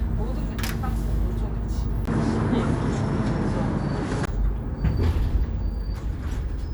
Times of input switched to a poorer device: 2.05-4.27

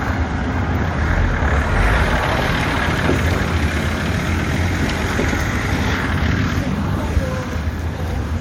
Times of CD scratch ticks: 2.78-3.17

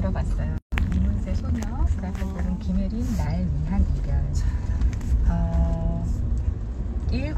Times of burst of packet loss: none

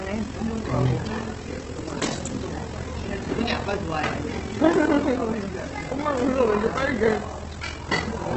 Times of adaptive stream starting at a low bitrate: none

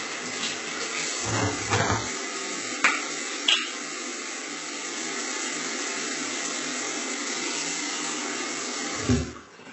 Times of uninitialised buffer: none

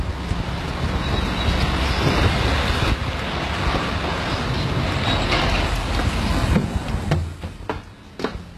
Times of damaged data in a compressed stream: none

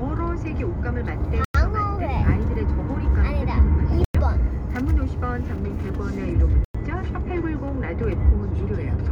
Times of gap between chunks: 1.45-1.54, 4.04-4.14, 6.64-6.75

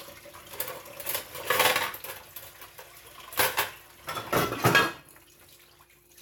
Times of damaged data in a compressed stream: none

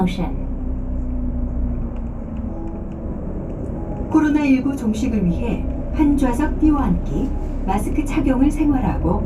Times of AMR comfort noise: none

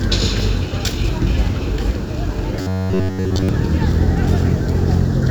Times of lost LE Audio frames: none

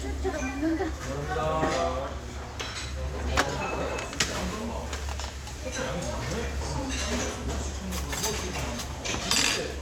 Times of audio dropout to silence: none

